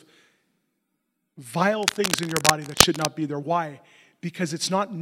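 From 1.81 to 3.05 s, cable scratch noise sits over the speech: dense, irregular bursts of crackling and rustling, somewhat louder than the speech itself. This is likely a worn cable, connector or control being moved, its contact resistance fluctuating rapidly.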